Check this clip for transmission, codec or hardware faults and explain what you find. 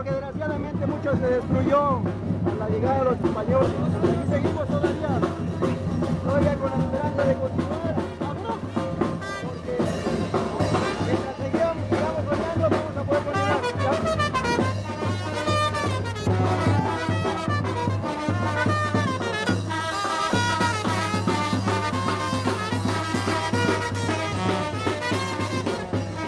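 One transmission fault turns up, a jitter buffer speed-up from 11.62 to 14.37 s. With excess audio queued, the receiver cut short pitch-period slices repeatedly, around 50 ms in all, so playback runs 2% fast at unchanged pitch. The spectrogram keeps identical harmonic spacing while events arrive slightly early. The waveform shows tightly spliced, seamless periods.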